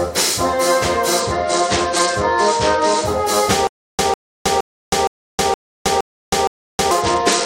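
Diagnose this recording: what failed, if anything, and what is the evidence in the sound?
Two separate failures here, both on the delivery side. The first is a Bluetooth SBC bit pool drop, a codec-stage problem. From 1.19 to 3.05 s, and again from 7.01 s to the end, the top end goes dull and a gritty, grainy noise sits under the sound. That's the phone throttling SBC on a busy link. The sound points to the bit pool falling from around 28 to about 9, roughly 78 kbps. The highest sub-bands get almost nothing, and everything else is quantised coarsely.

The second is a stutter with silent gaps, at the buffer or playback stage. Between 3.67 and 6.91 s, a burst about 150 ms long repeats seven times, each followed by about 317 ms of dead digital silence, so it comes back every 467 ms like clockwork. The likely cause is a stalled stream: the player replays its last fragment on each retry and then runs dry. 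Whatever should have played during those 3.2 s is simply gone.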